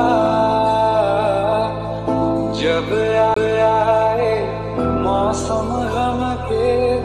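A CD skip occurs at 3.34 to 3.36 s. The laser pickup lost its place on the disc's spiral track, most plausibly from a knock or a surface flaw, and landed on another turn. The player muted for a brief moment, roughly 20 ms, before resuming from the new position. It is heard as a small tick and a gap, after which the sound carries on from a different point, as if a piece had been cut out or repeated.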